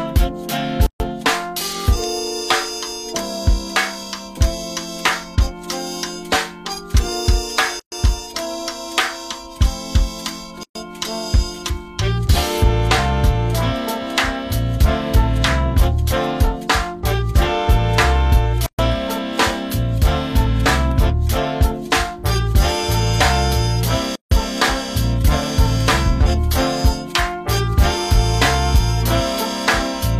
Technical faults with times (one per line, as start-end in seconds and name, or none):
0.86-1.00 gap at a join of encoded pieces
7.80-7.92 gap at a join of encoded pieces
10.63-10.75 gap at a join of encoded pieces
18.66-18.79 gap at a join of encoded pieces
24.15-24.31 gap at a join of encoded pieces